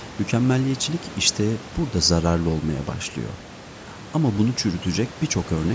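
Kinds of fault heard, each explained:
No faults can be heard in this speech clip.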